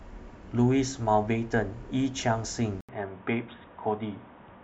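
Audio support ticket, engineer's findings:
Speech turns dull and boxy from 2.81 s to end, after an 80 ms dropout. Likely input switched to a poorer device. Spectrogram: content above 3.8 kHz cut off abruptly, new steady noise floor roughly 35 dB below speech. Waveform: no real level change.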